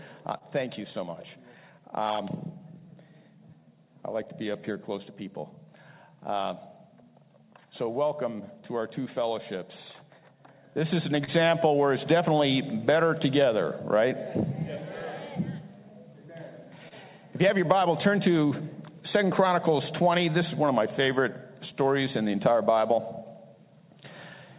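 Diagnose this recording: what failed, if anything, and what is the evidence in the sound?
Clock drift between sender and receiver runs through the whole recording, a network and buffer-stage fault. The sender's clock is roughly one and a half percent slower than the receiver's, so the jitter buffer keeps draining and the receiver has to stretch the audio to stay fed. The small timing irregularities scattered across the clip come from this. The sharp cutoff at 4 kHz fits a G.711 A-law narrowband call path.

Repeated timing corrections run from 1.80 s to 24.02 s. This is the buffer stage compensating for the slow sender by repeating short pieces of audio. The effective playback speed is 99 percent, and the corrections add around 0.3 s in total over that stretch. Each edit goes the same way, lengthening the audio, but the edits are unevenly spaced. They are heard, if at all, as small hiccups or a tempo that isn't quite steady.

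A short stall from a late packet occurs three times, at 0.38–0.44 s, 11.24–11.30 s and 16.88–16.94 s. Each time, a packet missed its playout deadline and the jitter buffer ran empty. The receiver held the last sound for 28 ms, 29 ms and 25 ms respectively, then resumed from the same point, with nothing lost. The evidence is a sound held briefly too long. Each stall raised the playout delay by the same amount.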